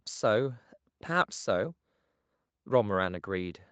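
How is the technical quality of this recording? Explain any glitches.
The speech has no glitches or dropouts, and its content stops at about 8 kHz with the coding texture of a wideband call codec such as Opus, as expected after a call's microphone processing and transmission path.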